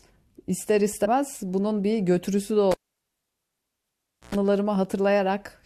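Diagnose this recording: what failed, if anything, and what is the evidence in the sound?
Compressed frames were skipped at the codec stage. From 1.04 to 1.06 s the speech jumps forward. About three frames, roughly 70 ms of audio, are gone. The jump fits 21.3 ms frames that were missing or rejected as damaged.

A cable was pulled and plugged in, an analogue wiring fault. At 2.71 s there is a pop and the sound drops to near silence for 1.59 s. A 107 ms burst of 60 Hz mains buzz comes as the plug makes partial contact. A second pop marks the return at 4.35 s.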